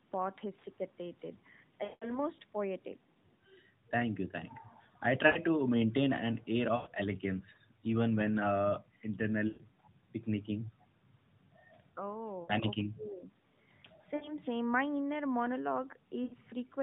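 Lost AMR speech frames occur at 1.84, 5.26, 6.76, 9.48, 12.44, 14.16 and 16.24 s, lasting 40 to 180 ms, the longest at 1.84 s. The decoder repeats its last good pitch and vocal-tract settings at falling gain, so each gap smears into a fading warble before the speech returns briefly rough.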